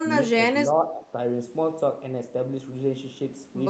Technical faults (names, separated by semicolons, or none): speech suppressed in double talk